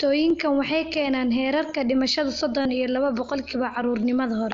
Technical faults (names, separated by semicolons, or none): concealed Bluetooth headset packet loss